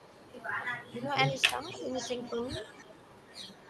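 From 0.0 to 0.46 s, a faint delayed copy of the speech trails it by about 265 ms. This is an echo leak, likely from a loudspeaker whose echo canceller let residue through. It returns at 0.87 to 0.94 s and is strongest from 1.7 to 2.45 s, about 15 dB below the speech. It comes back again from 2.67 s to the end. Elsewhere it sits about 25 to 30 dB down. Unlike room reverberation, it is a distinct repeat at a fixed lag.

At 0.93 to 1.09 s and 1.54 to 1.59 s, the speech itself dips by about 5 dB. This is speech suppressed in double talk, likely the canceller turning down the talker while both sides overlapped. Here something is taken away, a brief drop in level, rather than an added copy.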